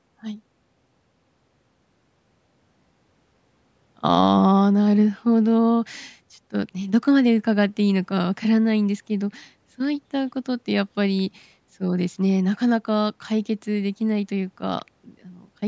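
The speech shows no technical faults, only the ordinary marks of a call's microphone processing: the lowest bass is trimmed away and nothing is present above 8 kHz.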